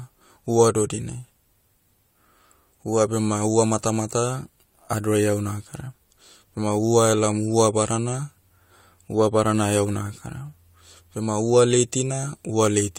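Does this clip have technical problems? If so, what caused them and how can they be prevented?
No, this clip has no technical problems, so there is nothing here that needs preventing.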